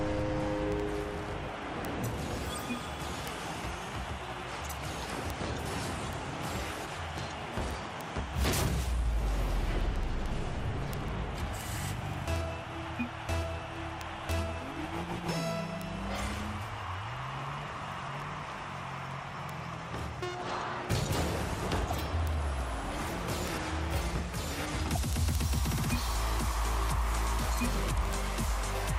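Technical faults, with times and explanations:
0.12 to 28.96 s, word clock ticks: sharp ticks keep landing roughly every 70 ms. The receiving device is running on its own clock, about 300 ppm off the sender's, so each time they slip past each other a single sample gets dropped or repeated.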